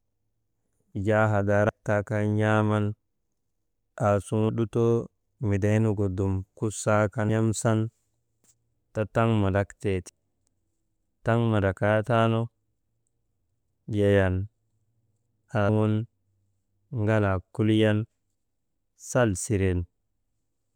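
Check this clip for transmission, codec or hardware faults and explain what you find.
One fault recurs in this speech clip: audio missing between chunks, at 1.69, 4.49 (just before "lutoo midaynugu dum kusaakan"), 7.29 (just after that phrase) and 10.09 s (right after "te taŋ mandraktee"). At each point, roughly a fifth of a second vanishes and the surrounding audio is butted together with no gap. The cause is likely a recorder or processor handling 3-second chunks and dropping audio at each handover, which makes the skips land at a steady rhythm.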